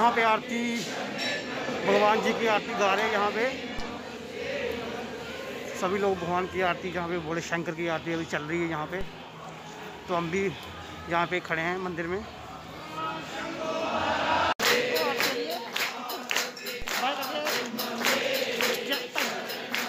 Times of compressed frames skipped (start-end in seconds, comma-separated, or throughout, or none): none